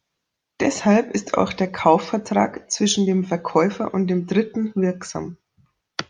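Nothing stood out as a technical fault anywhere in the speech on listening.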